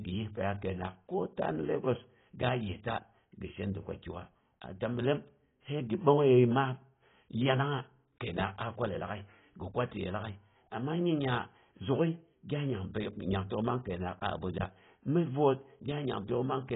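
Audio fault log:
Throughout, AAC compression: the encoder, likely AAC-LC running short of bits at a rate that fits about 16 kbps, drops everything above 3.8 kHz and coarsely quantises the remaining bands, so the speech sounds dull and smeared, with heavy warbling and fizzy sibilants.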